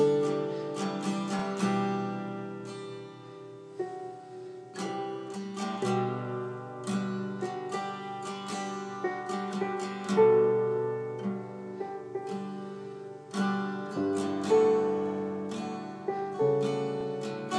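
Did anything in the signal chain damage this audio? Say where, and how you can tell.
Yes. There are repeated frames at the codec or storage stage, at 1.39 s and again at 17.01 s. At each point, a 32 ms block of audio plays once and then immediately plays again, producing a brief stutter. The length matches a single compressed frame being written or sent twice, so the decoder simply reproduces it a second time. Each repeat adds 32 ms, lengthening the clip by 64 ms overall.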